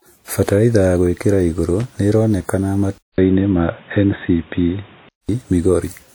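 Right through the speech there's a low-bitrate artefact layer that the file's high bitrate doesn't explain: a texture that a generous MP3 encode wouldn't produce. It's likely low-bitrate audio saved at a high bitrate, where something like a 64 kbit/s first pass did the damage and the later encode just preserved it. The band does run up to about 20.1 kHz, so what gives it away is the artefacts, not a low cut-off.

At 1.80 to 1.85 s, right after "ya gũĩkĩra igũrũ", there's a quick burst of loose connector crackle. It's a short, ragged scratch lasting about 50 ms, the kind you get when a dirty or worn contact flickers open and closed and chops the signal for an instant. It's brief.

Then just after "ya gũĩkĩra igũrũ nĩĩroneka", at 2.98 s, the input switched to a poorer device, most likely a headset or secondary mic taking over. There's a gap of about 200 ms at the changeover. After that, nothing above about 3.8 kHz comes through, so the speech goes dull and boxy. 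The level shifts by a few dB, and new background noise comes in, sitting roughly 35 dB under the speech. This lasts until 5.29 s, when the fuller sound returns.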